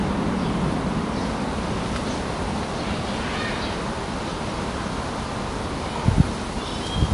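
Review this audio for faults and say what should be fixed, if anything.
AAC compression damage runs through the whole clip, and it is plainly audible. Nothing sounds above 11 kHz. The top of the spectrum is simply gone, so the sound comes across dull. The remaining bands are smeared and carry a fizzy, warbling texture. The likely cause is AAC-LC encoding at a low bitrate, which fits about 32 kbps. The encoder dropped the high band to spend its few bits lower down. Keep an uncompressed or high-bitrate master, and re-encode from that.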